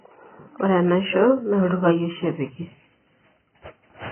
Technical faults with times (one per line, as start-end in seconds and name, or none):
0.00-4.11 AAC compression